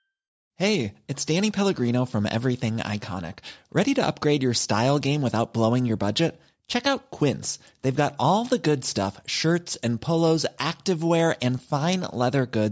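Nothing in this stretch of speech stands out as a technical problem, so there's no fault to describe here.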